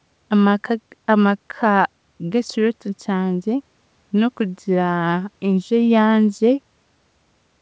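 No technical faults can be heard in this speech clip. It has passed through a WebRTC call path that is working as intended, and the sound stops at 8 kHz, which fits a wideband call codec such as G.722.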